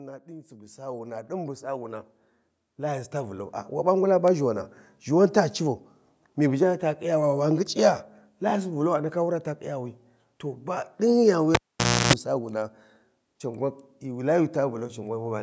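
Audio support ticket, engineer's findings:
Automatic gain rising, 0.25–4.26 s: voice and background swell together, about 14 dB, before "ʒhiwana ʒhiwan ta". Waveform envelope ramps upward steadily; AGC raising gain on quiet input.

Cable pulled and plugged in, 11.55–12.13 s: pop, roughly half a second near-silent, 313 ms of 60 Hz mains buzz, second pop. Spectrogram shows clicks, then 60 Hz harmonic stripes. Live connector reseated. The call microphone path's band limit at 8 kHz appears as a flat top edge.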